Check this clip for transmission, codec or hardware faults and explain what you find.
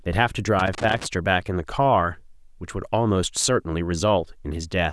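One hardware fault is present. From 0.59 to 1.06 s there is loose connector crackle. A worn contact makes and breaks, chopping the speech into an irregular scratchy burst.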